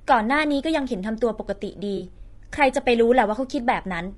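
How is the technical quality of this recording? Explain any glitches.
The recording has audible damage throughout plus one brief dropout.

Low-delay AAC compression, throughout: the speech sounds rough and grainy, with noise filling the gaps between harmonics and a thin, synthetic-sounding top end. This is likely AAC-ELD at a low rate, around 32 kbps, where its short frames resolve pitch poorly.

AAC frame loss with concealment, 1.97 to 2.02 s: roughly 40 ms of audio, which fits two lost frames, was replaced by the decoder's guess from the preceding spectrum, producing a short smeared, noisy patch in the speech.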